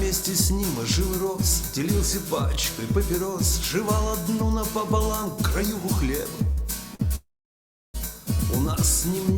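At 6.51 s and again at 6.95 s there is a short stall from a late packet: the jitter buffer ran dry, so the receiver held the last sound for about 58 ms and then 43 ms before resuming at the same point. Nothing is lost, but the sound drags briefly with a slight buzz or dip.

From 7.15 to 7.96 s the audio stops in a call audio freeze. The last sound trails off briefly, then about 690 ms of silence follows before the audio resumes where it left off, now running 786 ms later. The likely cause is packets delayed in transit emptying the jitter buffer.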